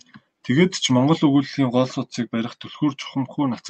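Nothing stood out on listening to the speech in this clip.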